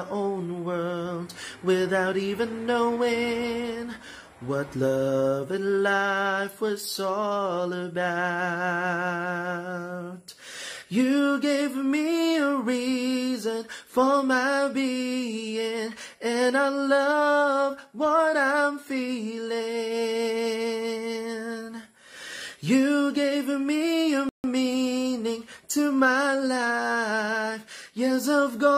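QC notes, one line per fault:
24.29–24.44 s, rebuffering stall: the player's buffer ran dry, so the audio drops to dead silence for 150 ms, then resumes exactly where it stopped. Nothing is lost, only time added. The waveform shows a flat line, and the spectrogram a clean blank vertical band across all frequencies.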